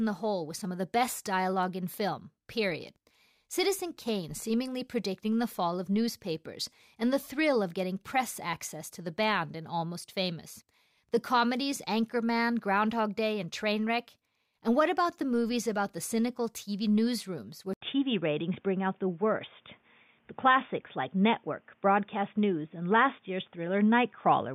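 At 17.73 s the speech cuts out for 80 ms, then returns dull and boxy, with nothing above 3.6 kHz, a level shift of a few decibels and a new noise floor roughly 45 dB down, likely an input switched to a poorer device.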